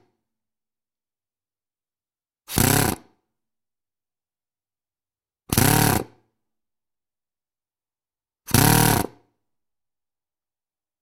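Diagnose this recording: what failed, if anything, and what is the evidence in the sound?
No failure is audible anywhere in this recording.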